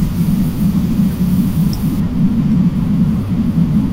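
From 0.0 to 2.0 s the speech has pre-emphasis left on. The treble lift was applied but its matching de-emphasis never was. It follows an FM 50 µs curve, leaving 10 kHz about 11 dB hotter than 1 kHz. The voice sounds thin, bright and sibilant, with sibilants sharp and spitting. On a spectrogram the upper bands glow noticeably stronger over that span. In the waveform, fine high-frequency detail rides visibly on top.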